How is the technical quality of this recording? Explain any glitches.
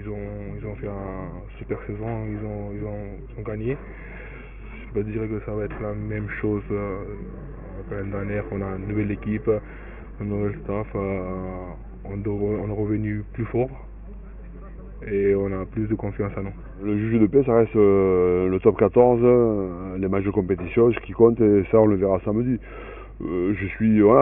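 Nothing stood out on listening; there are no glitches to explain in this recording.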